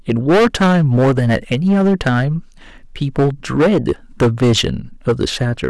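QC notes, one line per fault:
Throughout: hard clipping. The speech is driven about 14 dB beyond what the stage can pass, so every peak is sliced flat, and around a tenth of the samples sit pinned at the ceiling. Those squared-off tops throw harmonics high into the spectrum, giving a harsh, buzzy fuzz on each loud syllable rather than occasional crackle. Unlike soft saturation, the distortion switches on abruptly at a fixed level and stays gritty instead of warm.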